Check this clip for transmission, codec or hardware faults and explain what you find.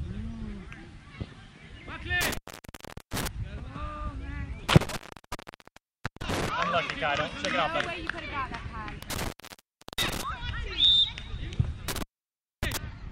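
The clip has a hardware fault: intermittent contact, occurring four times. The dropouts fall at 2.21–3.28 s (open about 0.76 s), 4.69–6.49 s (about 1.25 s), 9.02–10.23 s (about 0.71 s) and 11.88–12.77 s (about 0.60 s). A loose plug or cable connection briefly breaks the signal path, so the audio vanishes with a crackle as the contact breaks and remakes, leaving faint hiss in between. On a waveform these are abrupt gaps flanked by spiky transients. On a spectrogram they show as near-empty bands with broadband vertical streaks at their edges.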